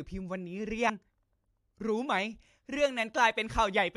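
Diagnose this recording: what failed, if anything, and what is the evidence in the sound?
Codec stage: damaged data in the compressed stream gives a short glitch at 0.88 s, where the decoder trips over corrupted frames and hunts for the next good header.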